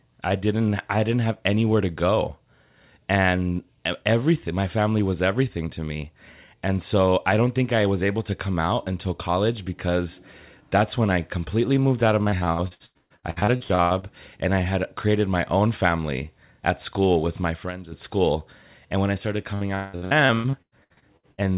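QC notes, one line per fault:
12.23–14.05 s and 19.54–21.41 s, repeated packet loss (robotic sound): the speech turns choppy, with chunks missing. The first run starts after "completely moved out of" and ends before "and I had created". The second follows "when I started". Packets kept going missing, and each hole was covered by stretching the previous sound. About half of the first span and 45% of the second are patched like this, with the longest gaps at 126 ms and 178 ms.
17.40–17.98 s, loudspeaker feedback squeal: right after "family at school with", a thin, piercing whistle at 6.4 kHz swells over roughly a third of a second and peaks at about 5 dB above the speech. A microphone picked up the loudspeaker it was feeding, and at that one frequency the loop gain exceeded one, so the tone fed on itself and grew. The call's telephone-band path, which carries nothing above 4 kHz, sits under the squeal.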